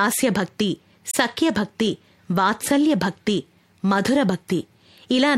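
At 1.11 s the speech is interrupted by a short glitch that ends by 1.15 s. This is a corrupt frame decoded. Some bits inside one compressed frame were damaged, and the decoder played it back anyway. Misread gains and codes placed energy at frequencies where it does not belong. The burst lasts about 40 ms, which fits a single frame of the codec. It peaks near -10 dBFS.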